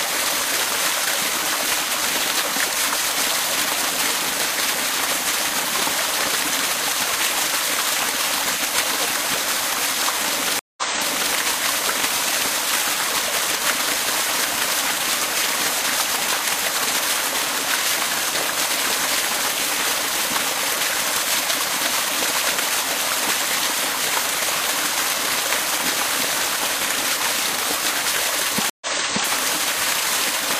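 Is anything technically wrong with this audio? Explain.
Yes, there are two stream reconnects. At 10.59 to 11.34 s the sound drops out for 180 ms, and at 28.70 to 29.29 s for 114 ms. Each time the connection broke and a fresh decoder restarted mid-stream from resent data, so playback resumes earlier, by 0.56 s and then 0.46 s. That repeated stretch of sound is what sets it apart from a plain dropout.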